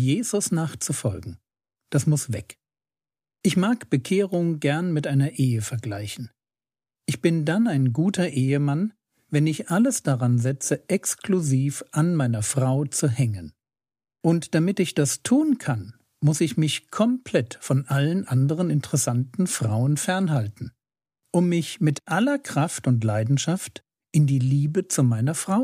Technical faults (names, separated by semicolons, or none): none